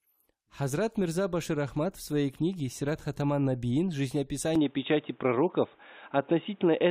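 At 4.56 s the speech abruptly turns dull and boxy and stays that way to the end at 6.90 s, with nothing above 3.8 kHz. The switch is seamless, with no gap. The level shifts by roughly 5 dB and a faint new background noise appears, well below the speech. This is likely an input switched to a poorer device. A plain bandwidth cut would narrow the band without also changing the tone, level and noise floor at once.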